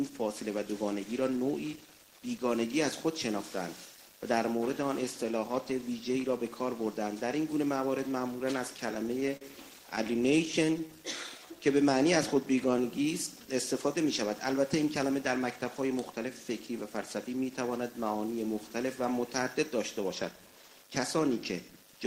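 From 8.77 to 9.42 s the audio catches and drags five times, each time holding on to the sound just played, with the longest hold about 43 ms. These are repeated stalls (stutter). Packets reached the receiver late or more slowly than playback consumed them, so the jitter buffer kept running dry. Each time, the receiver stretched the last sound to bridge the wait, adding 85 ms in all (13% of the stretch) while losing nothing.

Between 9.96 and 10.80 s, around seven brief hiccups and small smears break into the sound, none longer than about 15 ms. Between them the audio stays clear. These are scattered short gaps. Individual packets went missing or arrived too late, spread out over this stretch rather than bunched together. The receiver patched each hole by extending the preceding sound, filling roughly 50 ms in total with nothing actually missing.

From 11.40 to 13.32 s the audio drifts slower, to 93% of normal speed. 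Sounds are drawn out while the pitch holds steady. This is a jitter buffer slow-down. The buffer was short of its target reserve, so the receiver repeated single pitch periods and fragments of pauses over and over. That inserted 139 ms of audio to rebuild the cushion.

From 15.28 to 17.26 s the opposite happens. The audio runs hurried at 108% of normal speed with its pitch unchanged. This is a jitter buffer speed-up. The buffer had gathered more audio than it aims to hold, which happens when delayed packets land together. To cut that excess delay, the receiver repeatedly removed short slices of one or a few pitch periods, trimming about 150 ms.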